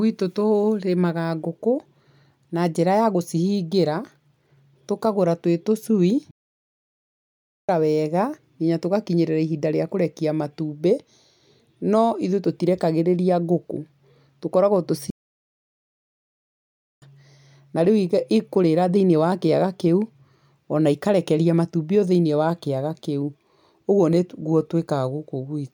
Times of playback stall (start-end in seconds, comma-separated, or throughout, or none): 6.31-7.69, 15.10-17.02